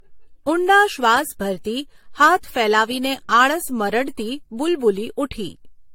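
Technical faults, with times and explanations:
Throughout, generation loss: the speech has a swirly, hollow, smeared quality, with consonant attacks blurred and nothing above 16.5 kHz. It sounds worse than a single encode would explain, so the likely cause is several passes, perhaps around four, through a lossy codec, which fits AAC-LC at about 64 kbit/s. Each pass quantises again on a shifted frame grid, so the noise and spectral holes pile up.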